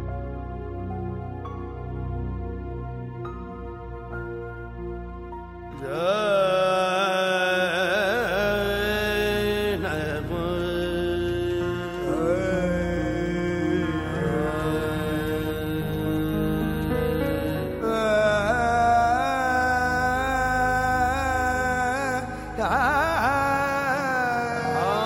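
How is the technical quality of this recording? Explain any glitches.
The recording carries one flaw, present throughout: sample clock jitter. The converter's clock wobbles by around two microseconds, so samples land slightly off time. Steep, loud, bright passages suffer most. The result is a hiss or roughness about 35 dB below the sound, gone in silence.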